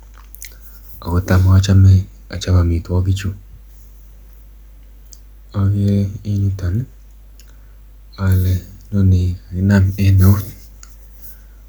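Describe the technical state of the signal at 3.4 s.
A steady low tone sits under the speech at 3.4 s, a mains hum at 50 Hz running through the whole clip, roughly 25 dB below the signal. It comes from the power line coupling into the signal path, through a ground loop or a nearby transformer.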